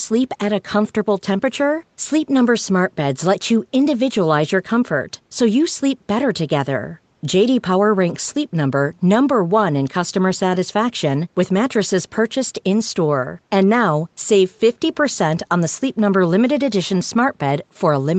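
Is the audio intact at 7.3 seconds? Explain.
Yes, at 7.3 s the speech is intact, with only the expected call-path character of a top end that stops at 8 kHz.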